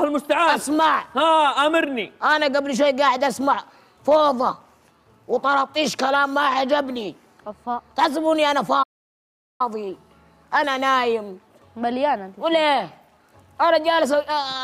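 At 8.82 s the player likely ran short of data, a playback stall: the sound drops to silence for 0.77 s, resuming at 9.61 s.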